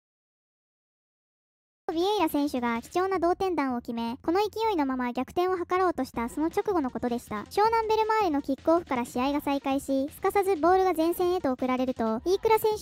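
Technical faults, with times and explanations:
0.00–1.89 s, cut-off start: The clip opens on digital silence, and sound begins abruptly at 1.89 s partway through, with no natural onset or fade-in. The recording or stream evidently started late, so the first part of the sound never made it in. On a waveform this is a flat line followed by a sudden wall of signal. On a spectrogram the first 1.89 s are empty, then energy appears across the band at once as a sharp vertical edge.
2.93 s and 10.95 s, gap between chunks: Each of these is a brief hole of about 7 ms in otherwise continuous sound. The audio was delivered in 4-second chunks, and at these joins a short stretch of silence was inserted. Nothing is missing, but the flow is interrupted at each join. A waveform shows a tiny flat notch, and a spectrogram shows a thin vertical blank stripe across all frequencies.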